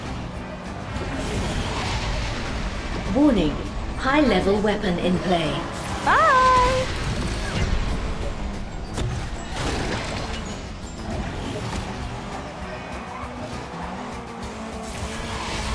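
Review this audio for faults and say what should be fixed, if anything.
From 7.55 to 10.81 s the sound slows to 0.919 times its speed and drops about 1.5 semitones. This is a wrong sample rate, which fits 24 kHz audio played at 22 kHz without conversion. Pitch and tempo fall together, which rules out a time-stretch or pitch-shift error. To prevent it, resample to the output device's rate, or tag the stream with its true rate, whenever the two differ.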